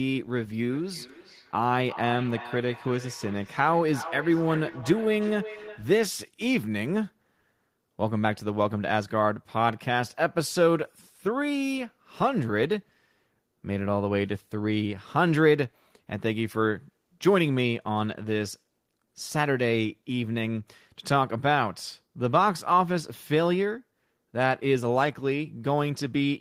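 From 0.73 to 5.97 s, a second device's playback re-enters the microphone, causing feedback echo between two devices. Speech recurs roughly every 0.4 s.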